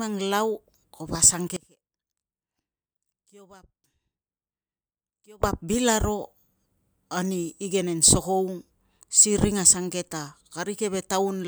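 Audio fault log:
1.56–5.43 s, audio dropout to a faint residue. The speech cuts out abruptly for about 3.9 s, then returns just as suddenly. Only a faint leak remains in the gap, roughly 25 dB below normal level. The signal was likely lost upstream while the later path stayed live.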